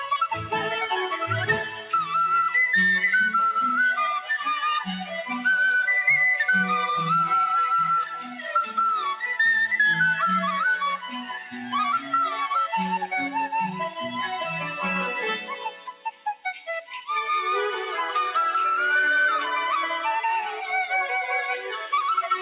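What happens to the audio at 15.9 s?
Sound cut by the noise suppressor, from 15.48 to 16.63 s: a speech-tuned suppressor treats this stretch as noise and pulls it down, reaching a drop of about 11 dB at its deepest. For well over half a second of that span, the level sinks and decays are clipped short. The noise suppressor applied to music or sounds is also active here, as it is across the whole clip. It swings the level by around 5 dB, so sustained parts and tails pump and thin while attacks pass. All of this sits inside the call path's narrow band, with nothing above 4 kHz.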